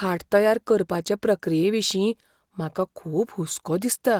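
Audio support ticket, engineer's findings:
Nothing to flag on this speech clip; the Opus voice coding at around 20 kbps in hybrid mode is doing its job, with the band carrying up to about 20.4 kHz and only light coding texture.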